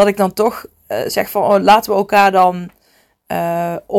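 Crackle breaks out on the speech peaks from 2.15 to 2.44 s. This is hard clipping: the level ran about 6 dB past what a stage could pass, so the peaks were sliced flat, spraying harsh upper harmonics across that stretch.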